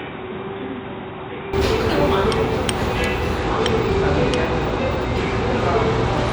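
An everyday sound recording opens dull and boxy: from 0.0 to 1.53 s nothing reaches above 3.8 kHz, the level sits roughly 10 dB lower, and a faint new background noise sits far below the signal. The input was likely switched to a poorer device, and the fix back to full range comes with no gap. The change in loudness and noise floor, not just lost treble, marks a different device rather than a codec problem. From 3.38 s to the end at 6.33 s the top end thins again, this time with a gritty, granular haze riding on the sound. That coarse quantisation noise marks a Bluetooth SBC bit pool drop, consistent with the bit pool falling from 31 to 13, around 94 kbps.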